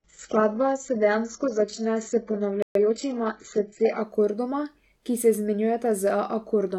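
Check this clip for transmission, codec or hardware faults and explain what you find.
Three faults are audible in this speech clip: a low-quality start that jumps up partway through, a short silence, and a brief hurried stretch just after it.

From 0.0 to 4.01 s the audio comes from an adaptive stream starting at a low bitrate. To begin quickly, the player fetched a cheap version first, then switched once it had measured the connection. The treble is missing or synthetic, and artefacts are stronger. That fits something like an 8 kbit/s HE-AAC rendition. At 4.01 s, just before "akordoma ki", the sound becomes full and clean, consistent with a step to roughly 96 kbit/s AAC-LC. Unlike a connection degrading mid-stream, the change goes upward, happens once, and leaves no gap.

At 2.62 s there is a playback stall: the sound stops dead for 128 ms and resumes at 2.75 s. The likely cause is the player running short of data or its thread being briefly blocked, so the output went silent until it caught up. 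What separates this from packet loss is that the output simply stops and waits, rather than a slice being dropped from a continuous flow.

From 2.75 to 2.99 s comes time-compressed catch-up. To clear the backlog left by the stall, the player cut out small pieces and cross-faded the joins, running the speech at about 1.5 times normal speed. The pitch stays where it was. A plain speed-up, like a fast clock or resampling, would raise the pitch along with the tempo. Here only the timing changes, and only for that quarter second.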